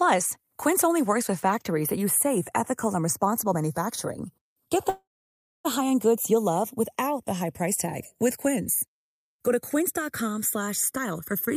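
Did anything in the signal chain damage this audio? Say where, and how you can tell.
Yes, three separate problems.

Throughout the clip the channels are drifting apart, which points to the converter stage: the two channels were captured by devices running on separate clocks that disagree by something like 70 ppm. The inter-channel delay creeps up to under a millisecond by the end, so a mono fold-down gives comb notches that glide slowly through the spectrum, a gentle flanging. A fixed channel offset would give static notches instead.

From 4.89 to 5.67 s there is a call audio freeze, most likely from packets stalling on the network. The last sound is stretched into a fading tail, then about 0.61 s of near-silence, and the speech resumes exactly where it stopped. A packet-loss dropout would skip material. Here nothing is missing; the stream has simply been pushed about 0.75 s later.

From 10.96 s to 11.55 s there is a jitter buffer speed-up in the receiver's buffer stage. 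Having built up excess delay, the receiver cuts many short pitch-period slices, about 70 ms in all, so the speech runs at roughly 113% of normal pace and sounds rushed. The pitch stays unchanged, which rules out a resampling or playback-rate error, since those would raise the pitch along with the tempo.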